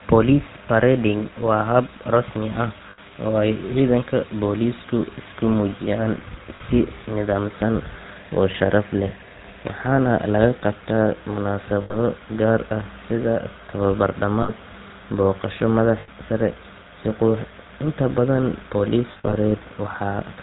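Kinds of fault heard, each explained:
GSM full-rate codec: Throughout the speech the plainly audible buzzy, gravelly roughness of the original GSM codec is present. At 13 kbps it models the vocal tract and excites it with regularly spaced pulses, keeping only every third excitation sample. Nothing above 4 kHz survives, so the voice sounds band-limited and harsh, with the grit most noticeable on higher-pitched moments.
lost GSM frames: Brief metallic, ringing smears at 2.9, 6.56, 11.82, 14.42, 16.0 and 19.12 s, each lasting 40 to 140 ms. When a frame is bad, the decoder reuses the last good frame's settings at falling level. The sound therefore hangs as a rough tone instead of dropping out. The final event, around 19.12 to 19.34 s, is broken up across about 200 ms, with its longest unbroken run roughly 70 ms.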